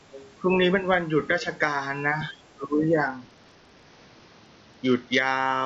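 Other side's voice leaking through appears in this speech clip at 0.13–0.30 s and 1.41–1.58 s, a faint second voice about 20 dB under the talker, likely loudspeaker echo the canceller left behind. It returns more weakly, about 30 dB down, at 2.62–2.67 s. Speech suppressed in double talk runs from 2.54 to 2.84 s: the talker's level dips by roughly 20 dB for about 300 ms while the other side speaks, likely because the canceller turns down everything it cannot separate from echo. A Bluetooth SBC bit pool drop from 3.07 to 5.19 s dulls the treble and adds gritty noise. That fits a congested link where the bit pool fell from 28 to 8, near 72 kbps, leaving the upper sub-bands starved of bits. The call microphone processing's usual band limit, with nothing above 8 kHz, is present throughout.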